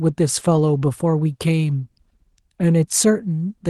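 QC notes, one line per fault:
0.55–0.57 s and 2.61–2.63 s, lost packet rebuilt from error correction: each time one 20 ms packet dropped, and the decoder played the next packet's low-bitrate backup copy, so there's a brief rough, noisy patch rather than a gap.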